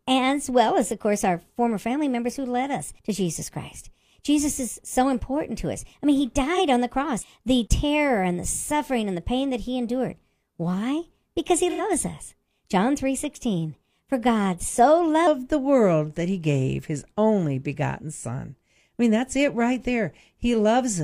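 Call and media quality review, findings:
Section at the wrong speed, 0.0–15.3 s: speech runs 1.18x fast, pitch raised about three semitones, returns to normal at 15.3 s. Likely clock or sample-rate mismatch in a player or edit stage. Tempo and pitch shift together, unlike pitch-only processing.

AAC frame loss with concealment, 6.54 s: brief smeared, phasey patch of about 43 ms, consistent with one lost frame; decoder refilled from previous spectrum.

AAC frame loss with concealment, 11.70–11.81 s: longer smeared patch, 85 ms, two frames concealed. Unlike a dropout or clipping, it is a blurred texture, not silence or a click.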